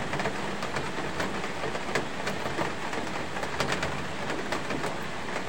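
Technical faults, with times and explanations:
0.81–0.86 s and 1.86–1.93 s, corrupt frame decoded: each time, a few damaged compressed frames got decoded anyway, so misread gains and codes push energy into the wrong frequencies. You hear a short chirpy blip peaking around -20 dBFS, lasting about as long as those frames.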